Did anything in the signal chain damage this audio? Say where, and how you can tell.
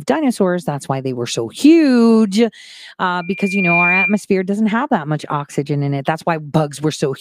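Yes. A loudspeaker feedback squeal sits in the acoustic path between microphone and loudspeaker, from 3.21 to 4.21 s, ending just before "doesn't have that much". A 2.4 kHz tone swells over about half a second to roughly 5 dB above the speech. On a spectrogram it shows as one bright horizontal line, and the waveform envelope balloons. The loop gain exceeded one at that frequency.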